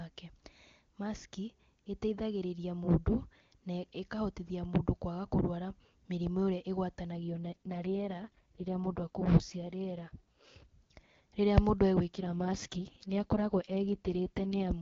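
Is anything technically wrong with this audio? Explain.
Yes. The speech carries two AMR rate drops, from 7.12 to 10.67 s and from 12.15 to 14.72 s. The AMR wideband link, whose full rate fits 23.85 kbit/s, is switched down to what sounds like its 6.6 kbit/s mode. The audio band stays the same and there is no gap, but the voice turns rough and raspy, with a synthetic buzz, until the full rate returns.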